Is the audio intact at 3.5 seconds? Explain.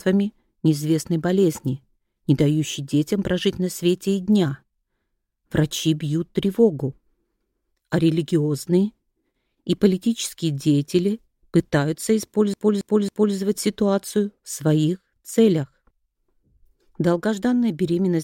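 Yes, at 3.5 seconds the audio runs through cleanly, with no dropout, click, glitch or other fault at that point.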